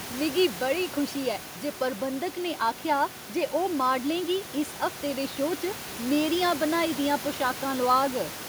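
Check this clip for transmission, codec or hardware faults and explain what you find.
No transmission, codec or hardware faults turn up here.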